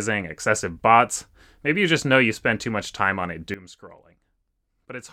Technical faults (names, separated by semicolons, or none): sudden gain jump